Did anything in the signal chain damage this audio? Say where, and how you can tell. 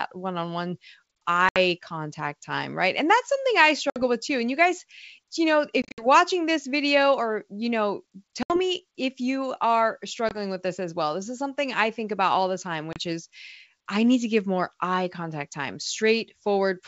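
Yes, the damage is at the network stage: packet loss on an ADPCM call. There are hard-edged holes at 1.49, 3.90 (right after "that's something I"), 5.82 to 6.07 (several short gaps), 8.43 (after "video or you know"), 10.29 (after "me if you are") and 12.93 s. After each one the sound comes back slightly distorted because the decoder's predictor and step size lost track of the sender's. It then settles over the next few tens of milliseconds. The G.722 coding underneath still sounds wideband.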